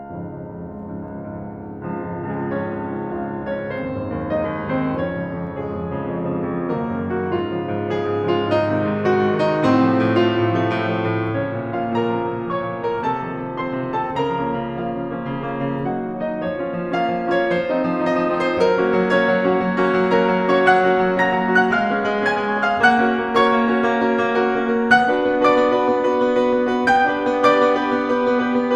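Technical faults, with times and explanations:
0.46–28.64 s, clock slip clicks: faint ticks recur roughly every 0.7 s, likely from unsynchronised clocks about 40 ppm apart dropping or repeating single samples.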